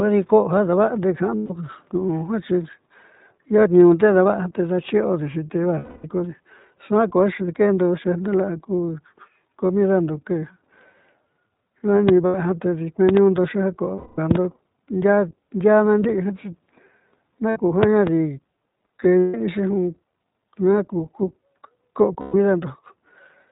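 Throughout, the speech passes through the iLBC codec at 15.2 kbps: band-limited below 4 kHz, with a plainly audible rough, synthetic edge that fits 20 ms frames coded independently.

Lost iLBC frames occur at 1.36–1.52 s (140 ms) and 5.78–6.05 s (260 ms). Each gap is filled by a repeated pitch cycle mixed with noise, heard as a held, buzzy vowel that fades over the longer loss before speech snaps back. A brief 20 ms dropout follows at 7.46 s. At 12.09 s a single loud pop, well above the speech level, sits on top of the continuing sound, likely a voltage step from a plug, switch or driver glitch. A further lost-frame gap runs from 12.26 to 12.35 s (80 ms). Double pops, each about 20 dB above the signal, land at 13.09–13.19 s and 14.31–14.38 s, with a 220 ms concealment gap between them at 13.96–14.19 s. Lost frames recur at 17.50–17.58 s (60 ms), then another double pop spans 17.83–18.09 s. 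The last two concealment gaps fall at 19.18–19.35 s (160 ms) and 22.20–22.35 s (140 ms).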